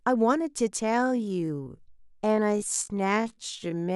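A time-stretched section runs from 0.8 s to the end, where the speech abruptly slows to about 0.54 times its pace while its pitch stays put. This likely comes from software lengthening the audio by repeating short slices, which makes it drag.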